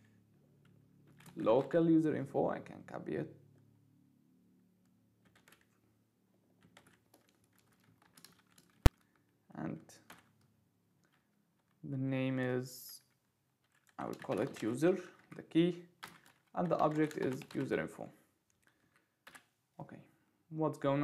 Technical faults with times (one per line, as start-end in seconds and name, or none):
8.86 invalid numbers at full scale